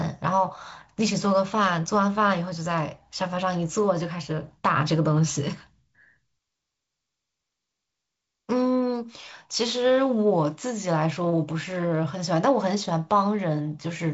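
Nothing stood out on listening to this speech, carried over G.722 wideband telephone coding with content reaching up to about 7.7 kHz.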